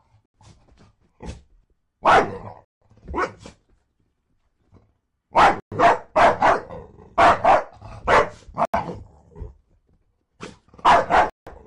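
Blocks of digital silence cut the sound at 0.26, 2.65, 5.6, 8.65 and 11.3 s, lasting 85 to 171 ms. The output buffer likely went unfilled, with 4096 or 8192 samples missing in all but the 5.6 s gap. Each is heard as a short hole.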